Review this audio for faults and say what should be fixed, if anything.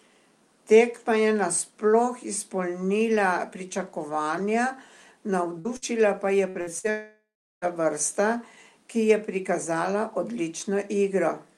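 Bursts of packet loss hit at 5.59, 5.77, 6.49, 6.61 and 6.79 s. Each drops about 60 ms of speech, which gets papered over with a fading buzz or hiss.

From 6.90 to 7.65 s there's about 0.72 s missing, likely a long network dropout. The concealment fades out, leaving roughly 0.38 s of near-silence before speech resumes.

To prevent both, stabilise the network path and add forward error correction with a somewhat deeper jitter buffer.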